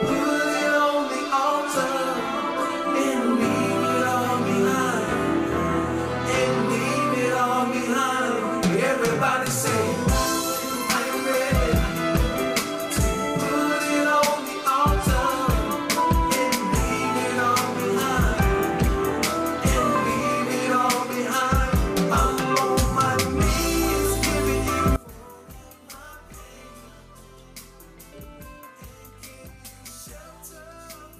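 From 24.96 s to the end, the sound drops by about 21 dB to a faint copy, with the centre nearly gone. The likely cause is one channel inverted, so material common to both sides cancels when they are summed to mono, leaving only their difference. On a waveform the envelope collapses abruptly at that point. A spectrogram shows energy falling away across the bands, leaving only faint residual content.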